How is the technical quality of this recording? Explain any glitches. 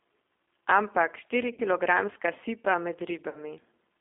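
The recording is narrowband and audibly coded, with two brief dropouts. G.729 codec throughout: at 8 kbit/s, speech is rebuilt from a filter, pitch predictor and sparse pulses, so it sounds rough and synthetic, confined to about 250 Hz to 3.6 kHz. VoIP packet loss concealed by the speech codec at 1.54 to 1.61 s and 3.29 to 3.39 s: about 40 ms went missing each time, which fits two lost packets. The decoder extrapolated from its last frame, producing a fading buzzy or noisy smear that stays weak briefly afterwards.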